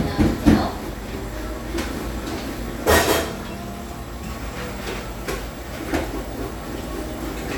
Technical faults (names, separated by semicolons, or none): none